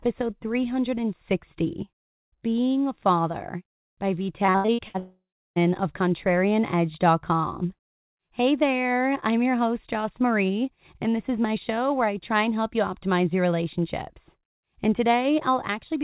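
Repeated packet loss (robotic sound) hits this speech clip from 4.46 to 4.96 s. Six short holes open in quick succession, the longest about 79 ms, and each is patched by stretching the preceding sound. Roughly half of that half-second is filled-in material rather than real audio, so about 0.26 s of the original is gone and what remains sounds choppy. Right after, from 4.98 to 5.58 s, the sound smears into a fading buzz and then drops to about 0.31 s of silence before returning with around 0.58 s never recovered, the pattern of a long network dropout, likely when the stream stalled and the receiver's concealment ran out. Throughout, nothing reaches above 4 kHz, consistent with a narrowband 64 kbps G.711 mu-law call path.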